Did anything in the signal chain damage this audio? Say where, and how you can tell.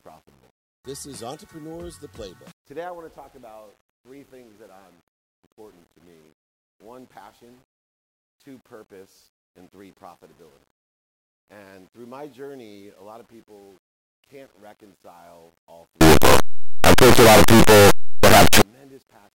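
Yes. From 16.01 s to 18.62 s the sound turns into a very loud, harsh distortion in which even soft parts come out as loud as strong ones. That points to the sample-format conversion stage, most likely 8-bit signed and unsigned samples mixed up, so the top bit of every sample is flipped and each zero crossing leaps across the full range. Plain overload clipping would leave quiet passages quiet.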